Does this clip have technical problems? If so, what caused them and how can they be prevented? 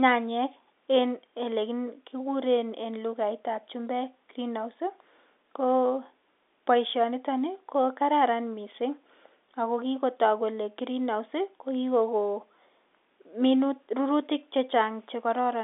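No, this speech clip has no audible technical problems.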